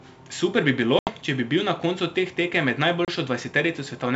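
At 0.99 s, between "bi bilo" and "če bi bil na", packet loss on an ADPCM call leaves an 80 ms hard-edged silence, with a shorter 30 ms hole at 3.05 s. Unlike a plain dropout, the speech comes back slightly distorted until the decoder's predictor resynchronises.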